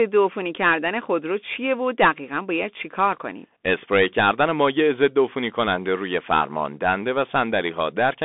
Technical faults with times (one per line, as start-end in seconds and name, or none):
0.00-8.24 Bluetooth CVSD headset codec